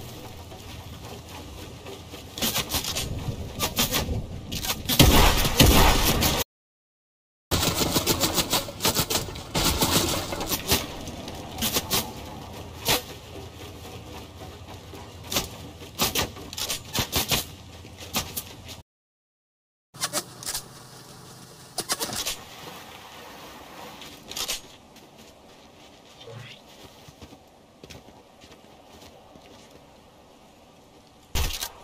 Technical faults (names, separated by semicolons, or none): playback stall; catch-up at higher speed